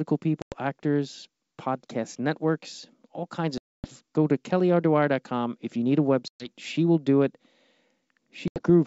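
A wideband speech recording, carried over what sounds like a full-rate G.722 link, is broken four times by packet loss on an ADPCM call: at 0.42–0.52 s (about 100 ms gone), 3.58–3.88 s (260 ms, roughly fifteen packets), 6.28–6.51 s (120 ms) and 8.48–8.62 s (80 ms). Each gap is hard-edged silence, not a smoothed fill. What separates this from a simple dropout is the restart. The decoder's predictor and step size no longer match the sender's, so the speech comes back slightly distorted before settling within tens of milliseconds.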